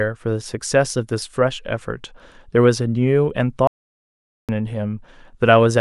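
At 3.67 s the speech cuts off mid-flow and stays in dead digital silence until 4.49 s, about 0.81 s with no room tone at all. That's an audio dropout to silence, likely a lost input or mute while the recorder kept writing silence, so that stretch is simply gone.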